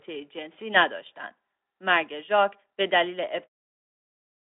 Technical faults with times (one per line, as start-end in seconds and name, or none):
none